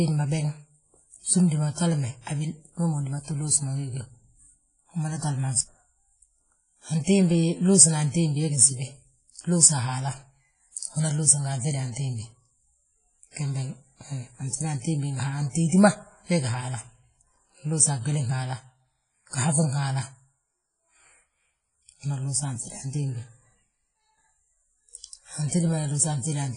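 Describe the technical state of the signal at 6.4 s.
At 6.4 s, as throughout, the speech shows heavy WMA compression damage, likely from a transform coder at a rate fitting about 24 kbps. Long-block quantisation noise and dropped weak components give a ringing, washy sound, hiss that swells with the voice, and nothing above 10.1 kHz.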